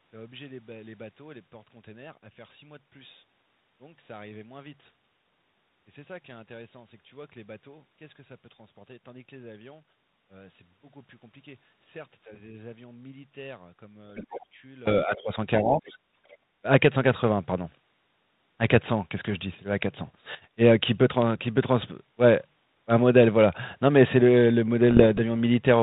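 From the start to 14.87 s, one stereo channel has likely been inverted in polarity, so when the two sides are summed to mono the shared centre content cancels. The speech falls by about 24 dB and what remains is a faint residue of the difference between channels.

Between 14.16 and 14.46 s, the echo canceller likely failed to fully remove the far end's loudspeaker playback from the talker's microphone, so the other side's voice leaks through. It sits roughly 20 dB below the main speech, a faint secondary voice underneath. A second, much smaller scrap appears from 16.28 to 16.37 s, around 35 dB down.

From 15.05 to 15.31 s and again from 15.65 to 15.95 s, the speech is suppressed during double talk. With both sides talking, the echo canceller likely could not separate the local talker from the echo and turned everything down. The talker's speech ducks by roughly 10 dB in the first stretch, for about a fifth of a second, and by roughly 15 dB in the second, for about 150 ms, sounding briefly pulled back.

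At 19.25 to 19.31 s and 24.91 to 25.21 s there are bit errors on the ADPCM link, which runs a G.726 codec consistent with the 32 kbit/s mode. The error rate is a few tenths of a percent. Each flipped bit also throws off the decoder's step size and prediction, so the damage carries on past the error itself. The result is pops and rough, gritty bursts with quick jumps in level, short at 19.25 s and more extended near the end.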